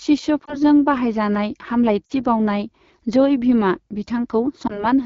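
Throughout, the AMR wideband (HD Voice) codec at 8.85 kbit/s, one of its lowest rates, leaves the speech rough and raspy. The pulse-driven vocal tract model is starved of bits, and the top band above 6.4 kHz is only shaped noise.

Lost AMR speech frames cause a brief dip or warble at 0.46–0.58 s, a drop to near silence at 2.06–2.12 s, and a brief dip or warble at 4.67–4.85 s. The decoder reused its last good settings at falling gain. The first and last fit one lost 20 ms frame, and the middle fits two.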